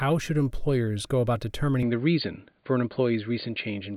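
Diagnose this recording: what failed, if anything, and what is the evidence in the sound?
From 1.83 s, right after "should employers go about", the speech abruptly turns dull and boxy through to the end, with nothing above 4.6 kHz. There is no gap at the change, the level stays about the same, and a new noise floor sits roughly 50 dB under the signal. The fault sits at the capture stage: the input likely switched to a poorer device, whose narrower band and own background noise replace the original microphone's.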